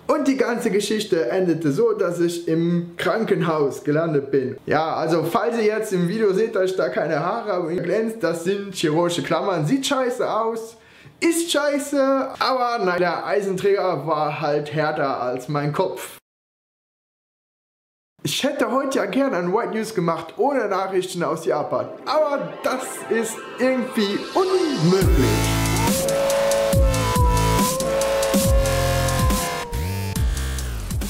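At 7.78 s and again at 12.98 s the audio breaks into a short chirp or blip, each the mark of damaged data in a compressed stream. Bytes in the encoded file were corrupted there, so the decoder misread the affected frames, lost its place, and hunted for the next valid frame header before playback resumed. On a spectrogram each shows as a brief, garbled vertical smear of energy; the waveform shows a tiny irregular burst breaking the surrounding pattern.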